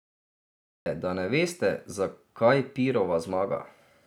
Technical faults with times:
0.00-0.86 cut-off start

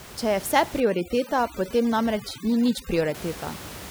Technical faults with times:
0.80-3.15 overdone noise removal

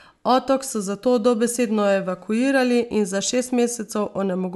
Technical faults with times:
none

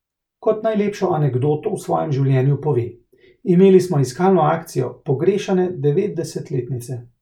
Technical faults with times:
none

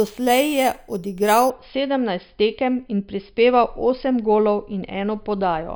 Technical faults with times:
0.00-1.50 imaging from sample-and-hold upsampling

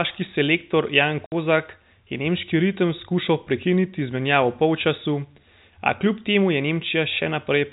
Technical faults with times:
1.26-1.32 packet loss filled with silence

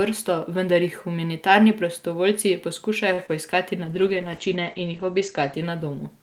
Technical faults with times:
3.13-3.20 short stall from a late packet
3.26-3.30 short concealed packet loss
3.84-6.22 call bitrate drop

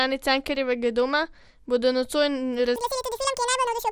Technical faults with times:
0.00-3.92 MP2 compression
2.76-3.92 section at the wrong speed

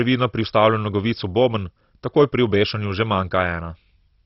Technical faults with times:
0.00-4.26 MP2 compression

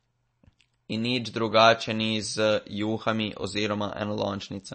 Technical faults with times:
0.00-4.74 MP3 compression

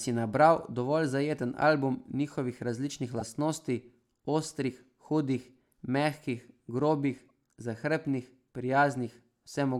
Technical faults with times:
3.18-3.31 corrupt frame decoded
7.18-7.31 corrupt frame decoded

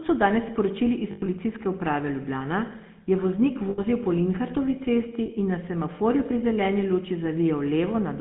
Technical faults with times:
0.00-8.21 GSM full-rate codec
1.12-1.29 lost GSM frames
3.70-3.81 lost GSM frames
5.26-5.30 lost GSM frames

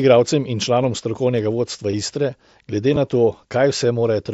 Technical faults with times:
1.92 concealed Bluetooth headset packet loss
2.94-2.97 chunks out of order

